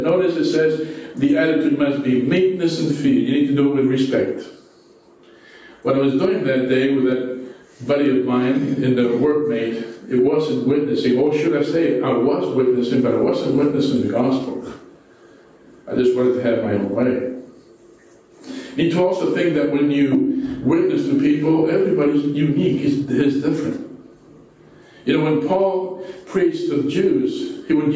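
Throughout the recording there is a pumping effect that squashes loud and soft passages into a narrow band, with the level swinging by something like 15 dB. This is gain pumping, likely caused by the microphone gain being set far too high so that a fast limiter or compressor keeps clamping down on every peak and releasing in the gaps. The band-limited sound, with nothing above 8 kHz, comes from the call's microphone processing.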